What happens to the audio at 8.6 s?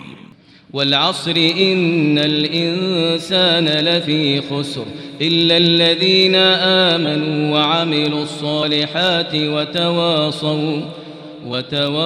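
Between 8.59 and 8.63 s the audio loses a run of compressed frames: those frames were missing or rejected by the decoder as damaged, so playback jumps ahead by about 50 ms of material. If the codec is lossy, adjacent frames overlap and the join is a short smeared blip; with lossless frames it is a hard click. On a waveform the envelope shows an abrupt discontinuity in its shape, and a spectrogram shows the spectral content shifting suddenly at the join.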